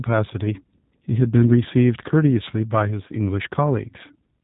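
Throughout, the speech carries plain G.729 codec damage. Nothing passes above 3.8 kHz. The rough, synthetic rebuild fits an 8 kbit/s model-based codec.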